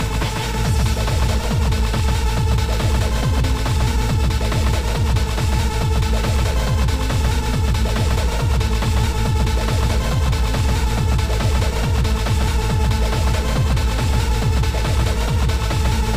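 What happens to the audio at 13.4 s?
At 13.4 s the sound carries a doubled audio track, present through the whole clip. A second copy trails by roughly 150 ms, only a few decibels quieter. It is full-band and dry, with no decay. It likely comes from a slower second capture path.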